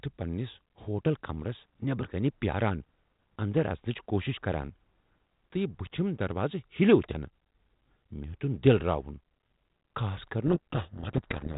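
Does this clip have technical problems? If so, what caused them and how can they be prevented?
Yes. From 10.46 s to the end at 11.58 s, the speech turns into harsh distortion. This is a codec payload misread: the receiving G.726 decoder unpacks each code word with its bits in the reverse order, so most sample differences it rebuilds are wrong. Prevent it by having both ends agree on G.726 bit packing during call setup.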